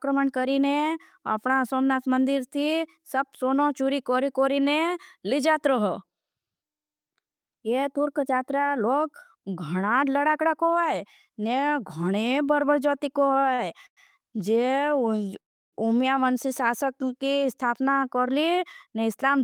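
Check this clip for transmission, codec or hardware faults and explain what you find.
There are three kinds of network-timing fault in this speech clip, all in the second half, and no codec or hardware trouble stands out.

Short stall from a late packet, 13.54 to 13.60 s, right after "घणे बरबर जोती को": a packet showed up late, the jitter buffer ran dry, and the receiver stretched the last bit of sound by 40 ms. You hear a syllable hang slightly too long, then carry on with nothing lost.

Call audio freeze, twice: 13.86 to 13.99 s and 15.40 to 15.75 s. Both sound like the audio briefly smearing and then dropping to silence, 80 ms the first time and 320 ms the second, before picking up exactly where it left off. The likely cause is packets held up in transit, emptying the buffer. This adds gaps rather than losing speech.

Jitter buffer speed-up, 17.44 to 19.37 s: after those delays the buffer was overfull, so the receiver trimmed tiny pitch-period slices over and over, around 150 ms in total. 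The speech runs about 7% fast at unchanged pitch and feels a little rushed.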